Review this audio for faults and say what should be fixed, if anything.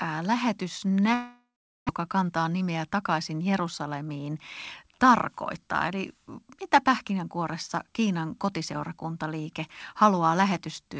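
Long network dropout, 1.14 to 1.91 s: the speech trails into a fading buzz and then about 0.42 s of silence. Roughly 0.4 s is lost for good, likely from a network outage that shifted the delay by around 0.3 s. To prevent it, add redundancy or forward error correction and check the stability of the network link.

Jitter buffer speed-up, 2.01 to 4.30 s at 111% and 4.84 to 6.15 s at 105%, ending just before "mitä pähkinänkuoressa": the receiver trims pitch-period slices from an overfilled buffer. The speech sounds hurried but keeps its pitch, losing roughly 0.3 s and 0.07 s. To prevent it, reduce the packet bunching that overfills the buffer and let the buffer drain more gradually.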